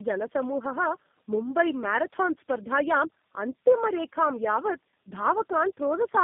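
A speech clip carrying tandem speech coding throughout: the call appears to have crossed several networks, each with its own speech codec, so it was decoded and re-encoded at every border, likely three low-rate coders in a row with the last consistent with G.729A. Each stage re-models already damaged speech, so the errors stack. The result is rough, muffled and warbly, with nothing above 3.7 kHz.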